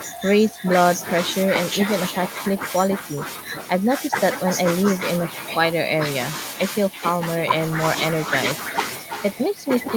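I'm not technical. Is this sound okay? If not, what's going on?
No, there's echo with no canceller running through the whole clip. Everything said comes back about a third of a second later as a quieter, thinner copy, because the far end's loudspeaker feeds its microphone and nothing strips that out.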